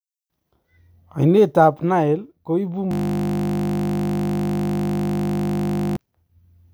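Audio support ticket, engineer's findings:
System hang loop, 2.91–5.97 s, right after "ko ibu": host or audio driver stalled while the hardware kept replaying one ring buffer, which fits a roughly 20 ms buffer. The same 20 ms slice repeats about 150 times, a steady 50 Hz buzz.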